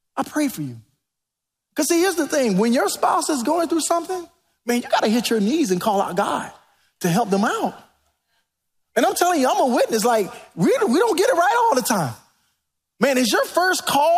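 No technical faults are audible.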